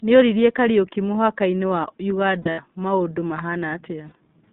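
Throughout, the speech passes through the iLBC codec, held between 200 Hz and 3.7 kHz, with each 20 ms frame coded independently, which fits iLBC's 15.2 kbps mode. The result is a plainly audible rough, slightly synthetic grain. Simple band-limiting would only dull the sound.

From 2.42 to 2.60 s, lost iLBC frames remove about 120 ms of audio scattered over 160 ms, with the longest unbroken gap around 70 ms. A second loss at 4.08 to 4.13 s covers 40 ms. The decoder repeats the last pitch cycle mixed with noise, so each gap sounds like a short held, buzzy vowel rather than silence. Because iLBC frames stand alone, the voice snaps back cleanly right after each gap.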